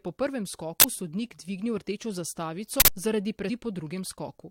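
At 0.80 s, just after "po prvem", the speech is cut by a short, loud burst of digital noise lasting 40 ms. This is an uninitialised buffer. A block was sent to the output before any audio had been written to it. Whatever values sat in that memory were played as samples. The same fault returns at 2.80 s. This time the burst lasts 80 ms, twice as long.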